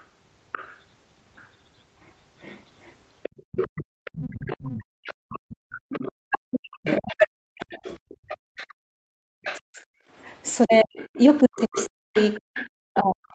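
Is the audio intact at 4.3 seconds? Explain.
No. The other side's voice leaking through runs from 3.23 s to the end at 13.34 s: a second, fainter voice sits well under the main talker, likely because the far end played on a loudspeaker and the echo canceller did not fully remove it from the microphone.

The background is also gated by the echo canceller between 3.92 and 5.05 s. While the loudspeaker was active, the canceller pulled the microphone down hard, so the room sound dips by up to about 40 dB, for roughly a third of a second in total, before returning.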